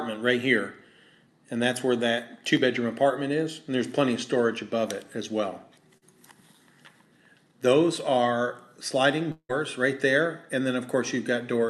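At 5.97–6.04 s, a short concealed packet loss: about 40 ms of audio missed the decoder, so the receiver extended the preceding sound, heard as a brief smear before blending back. From 9.32 to 9.51 s, the last sound stretches into a fading buzz or hiss, then about 60 ms of silence before the audio resumes with a gap, likely a long network dropout. Throughout, the call codec's top end rolls off around 12 kHz.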